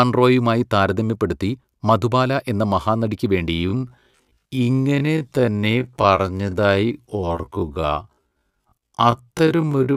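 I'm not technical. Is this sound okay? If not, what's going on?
No. From about 3.49 s right to the end, the speech suddenly drops to roughly half its normal pace while the pitch stays put. That's a time-stretched section. Most likely, software stretched that part to fill a longer slot and kept the pitch steady by repeating tiny slices of sound. That's why the slowed speech drags.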